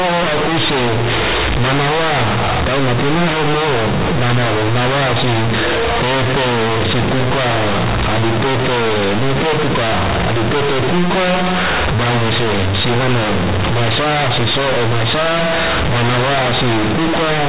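Companded audio read as linear runs through the whole speech clip. The A-law bytes from the telephone coding are played back as plain 8-bit samples without being expanded. Because A-law places the sign in the top bit, every sign change throws the output across about half its range, so quiet passages come out as large as loud ones. The waveform is badly bent, giving very loud, buzzy distortion and heavy noise filling the pauses.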